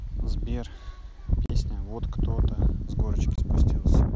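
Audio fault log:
1.46–1.50 s and 3.36–3.38 s, unconcealed Bluetooth headset packet loss: the speech drops out twice, for about 38 ms and then about 23 ms. Each gap has hard edges. Voice packets between headset and phone went missing and nothing filled the holes, so silence or an idle pattern stands in for the lost sound. The lengths fit runs of five and three 7.5 ms mSBC frames. The wideband mSBC audio around the gaps carries only light grain.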